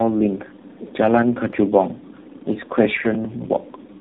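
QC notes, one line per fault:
Throughout: tandem speech coding, four speech codecs in a row ending in AMR-NB, each re-coding the last one's degraded output, leaving speech rough, muffled and warbly, nothing above 3.8 kHz.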